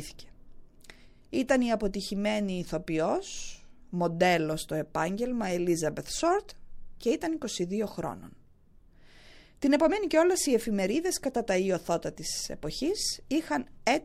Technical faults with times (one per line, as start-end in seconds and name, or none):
1.93 pre-echo